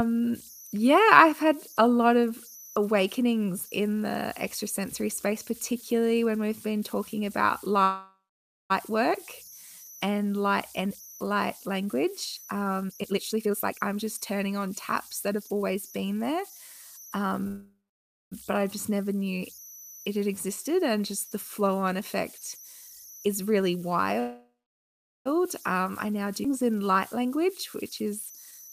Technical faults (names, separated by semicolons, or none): converter idle tones; call audio freeze; jitter buffer speed-up; skip ahead